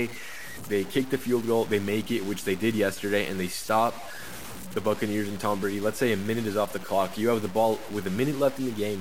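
From start to finish the speech carries a coarse, gritty distortion that rises and falls with the voice, with quiet tails breaking into sputter or silence. The likely cause is low bit depth without dither: truncation to about 5 bits, leaving error only around 15 dB below the signal.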